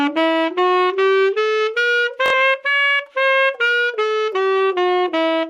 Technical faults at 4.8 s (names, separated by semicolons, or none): none